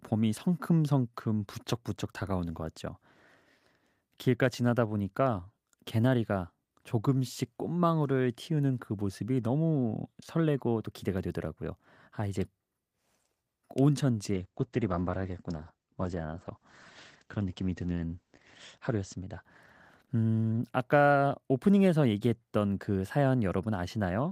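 A call bitrate drop affects this speech clip from 14.32 s to 21.25 s. A falling bandwidth estimate forced coarser encoding, consistent with a drop from 40 to 10 kbps. Audio bandwidth narrows from 20 kHz to 8 kHz, sounding muffled and watery, worst for about 4.1 s.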